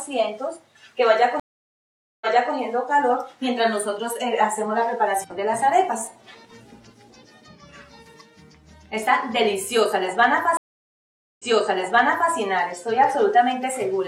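At 1.40 s the audio cuts to silence for about 815 ms, then resumes at 2.54 s from a point roughly 325 ms earlier, so a short stretch repeats. At 10.57 s the same stream reconnect happens again: about 822 ms of silence, then playback returns at 12.32 s some 929 ms back. In each case the connection dropped, the player reconnected, and a fresh decoder started on a server burst that resent already-played audio.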